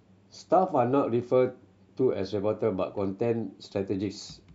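No technical faults can be heard anywhere in the speech.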